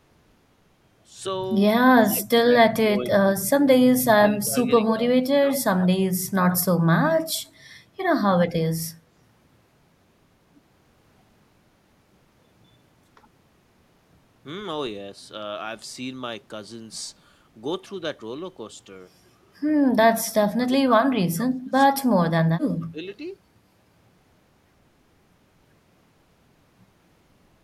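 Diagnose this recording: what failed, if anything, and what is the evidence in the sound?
The call processing failed, most likely in the echo canceller during double talk: it turned down the talker along with the far-end echo. The speech dips by about 20 to 30 dB in pieces within 1.83–2.29 s, 2.83–5.86 s, 20.09–22.03 s and 22.63–23.0 s.

The echo canceller also likely failed to remove all of the loudspeaker pickup, so echo leak was sent back. A copy of the speech delayed by 108 ms appears at 4.4–4.93 s, 5.79–5.87 s and 6.5–6.61 s, fading from about 10 to 20 dB below the speech.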